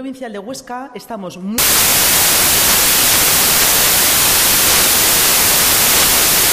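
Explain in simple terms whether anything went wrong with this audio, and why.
From 1.58 s onward, samples built from the wrong bytes turn tiny fast-changing details into huge values, so the sound becomes loud, harsh noise.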